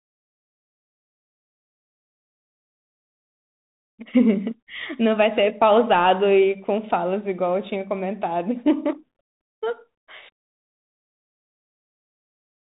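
From start to finish, the speech carries a Bluetooth CVSD headset codec. Nothing above 3.8 kHz survives. Its coarse one-bit steps leave s sounds scratchy over granular hiss.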